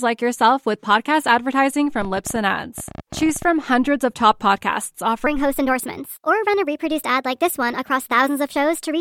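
Speech, with a train of clicks from 2.02 to 3.43 s: around twenty similar-shaped pops at about 16.4 per second, unevenly spaced, peaking near the level of the speech itself. They likely come from interference or a faulty connection. Their matching shape and steady density set them apart from random vinyl-style crackle. From 5.27 s to the end, a section at the wrong speed runs 1.24 times too fast, roughly four semitones high, probably from playback against the wrong clock. Because timing rushes along with the raised pitch, it isn't a pitch shift alone.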